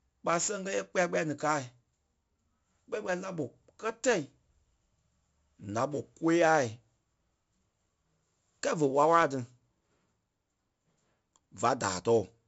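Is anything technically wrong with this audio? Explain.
Yes. The speech carries 4-bit ADPCM compression damage throughout the clip, and it is heavy. Each sample is coded as a coarse 4-bit step from a predicted value, with the step size adapting to the signal. The resulting error is a gritty hiss that rises and falls with loudness and roughens sharp onsets. Nothing is present above 7.7 kHz, which points to a sample rate near 16 kHz and fits a 64 kbps stream.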